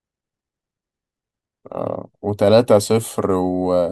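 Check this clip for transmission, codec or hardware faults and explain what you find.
Nothing faulty can be heard anywhere in this speech.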